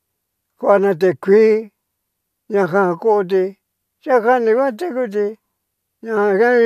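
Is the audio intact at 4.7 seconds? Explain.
Yes, at 4.7 seconds the audio is intact, with no dropout, click, distortion or other fault at that moment.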